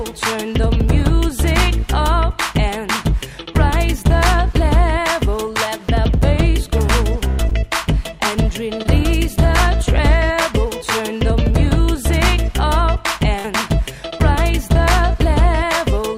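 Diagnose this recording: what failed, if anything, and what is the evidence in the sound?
The network dropped audio packets twice, in short concealed packet loss at 7.49 to 7.53 s and 8.83 to 8.87 s. About 20 ms went missing each time, and the receiver patched it by extending the preceding sound. Each event is a brief smear. On a spectrogram it shows as a short stretch of smoothed, repeated texture, with a slight seam where real audio resumes.

A burst of packet loss hits at 13.39 to 13.46 s, also a network fault. About 60 ms never arrived. The decoder stretched the last sound across roughly 50 ms and faded it, then jumped ahead. On the waveform this is a decaying, repetitive segment followed by an abrupt continuation, with the intervening audio absent.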